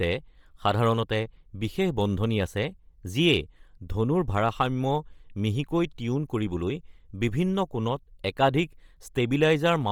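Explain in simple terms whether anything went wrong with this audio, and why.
Something did go wrong, and it lasts for the whole clip. The speech has a breathy, grainy edge, as if a fine hiss sits on top of the higher sounds. This is heavy damage that points to Bluetooth LC3 compression, the likely cause. That codec cuts audio into 10 ms slices and, when it is short of data, throws away much of the treble and fills the gap with synthetic noise, which makes the speech sound rough.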